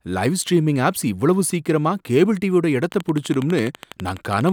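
Something in the chain, likely interference from nearby equipment or a faulty connection or power supply, starts injecting a repeated pulse into the speech from 2.84 s until 4.50 s. The result is a train of clicks: about twenty near-identical ticks at an even 12.1 per second, each peaking roughly 5 dB above the surrounding signal. They sit on top of the speech as a steady, sharp ticking that is heard in any gaps too.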